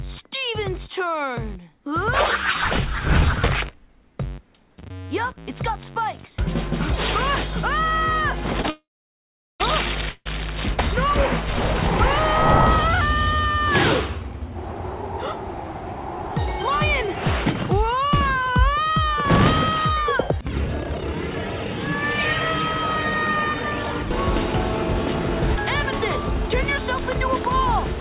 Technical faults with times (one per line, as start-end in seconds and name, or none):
8.62-8.66 short stall from a late packet
8.70-9.62 call audio freeze
10.10-10.27 call audio freeze
16.69-20.45 jitter buffer speed-up